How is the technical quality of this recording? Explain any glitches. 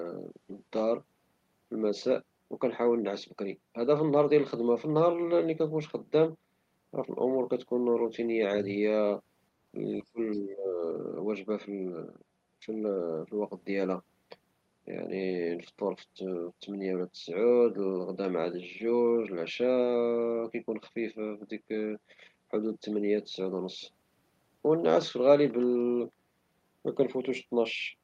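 The recording has two linked glitches, both in a short stretch near the ten-second mark where two people appear to be talking at once.

From 10.12 to 10.82 s there is speech suppressed in double talk. The speech sinks by as much as about 15 dB, and roughly half a second of it is affected. The likely cause is an echo canceller that could not separate this talker from the far-end sound playing on the loudspeaker, so it pulled everything down together.

From 10.33 to 10.41 s, inside that dip, the other side's voice leaks through. A faint second voice, around 30 dB below the main speech, is picked up by the microphone and survives the echo cancellation as a brief scrap. Because it is so quiet and appears only during the suppressed stretch, it is likely residual echo, not crosstalk or a second person in the room.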